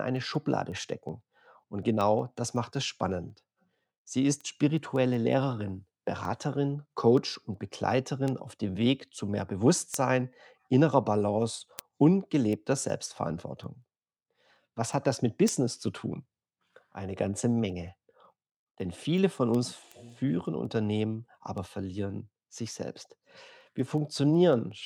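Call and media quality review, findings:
Word clock ticks, 0.17 s to 24.7 s: sharp, uneven clicks about five a second. Receiver likely free-running, unlocked from the digital source. Clocks drift roughly 150 ppm apart, so one sample drops or repeats at each slip.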